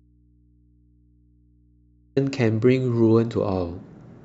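Signal was likely lost upstream while the input stayed live, giving an audio dropout to a faint residue in this speech clip: from the start until 2.17 s only mains hum remains, roughly 40 dB below the speech, which then returns abruptly.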